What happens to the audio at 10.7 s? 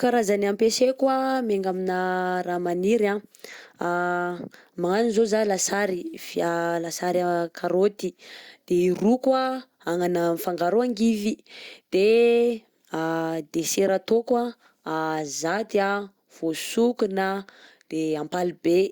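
Nothing goes wrong at 10.7 s; the speech runs through that moment intact, with no break, click or distortion.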